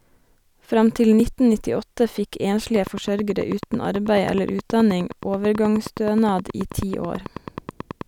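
A speech recording with a sharp tick at 1.20 s, where a block of digital silence about 1.7 ms long drops the signal out and back with no fade. From 2.76 s to 8.02 s, a train of clicks ticks steadily at about 9.3 per second, some fifty evenly spaced pulses standing out above the speech and in its pauses. This is likely interference from nearby equipment or a faulty connection or power supply.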